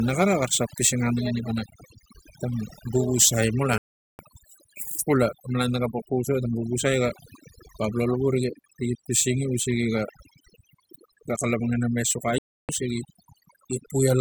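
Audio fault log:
throughout, overdone noise removal: over-strong suppression zeroes frequency bands near the noise estimate, leaving a lowered background that breaks up into twinkling specks.
3.78 to 4.19 s and 12.38 to 12.69 s, Bluetooth stall: playback drops to silence for about 411 ms and 304 ms, then resumes, likely from interference starving the headphone buffer.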